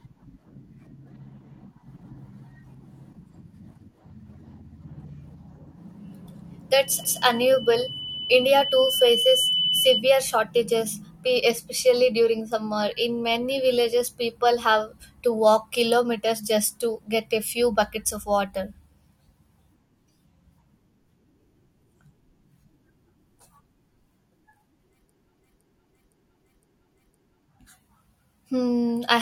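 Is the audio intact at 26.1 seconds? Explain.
No. At 26.1 seconds the speech is caught in a stretch of repeated frames running from about 25.39 to 27.43 s. A run of compressed frames was sent again, so the decoder replays the same 512 ms block four extra times. The result is a stutter. These replays add about 2.05 s to the running time.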